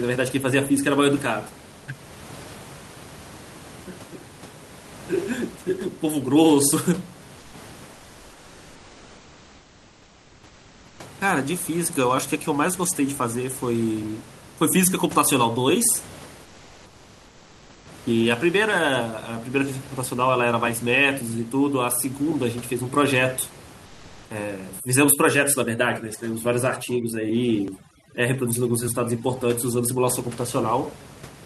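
In the pauses, the sender's codec appears to stop transmitting, and the receiver fills the gap with comfort noise in place of the background, likely from Opus discontinuous transmission. The real room noise gives way to a smooth, featureless hiss at 7.39 to 7.53 s, 7.93 to 10.99 s, 16.45 to 17.85 s and 23.85 to 24.29 s. That hiss sits about 3 dB lower in the first gap, about 2 dB lower in the next two, and at much the same level in the last, and the original texture returns when the sound resumes.

From 24.80 to 30.10 s, a noise reduction stage set far too strong gives overdone noise removal. It treats frequency bands near its noise estimate as noise and pushes them almost to nothing, taking the quieter parts of the speech with them. The background drops away and breaks up into twinkling specks.

Inside that stretch, two dropped buffers (overrun) occur where samples were probably overwritten before being read, and the audio either side is spliced straight together. 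The first, at 27.68 s, loses only a few milliseconds, and the second, at 28.88 s, loses about 15 ms. Each is heard as a small skip forward in the sound rather than a gap.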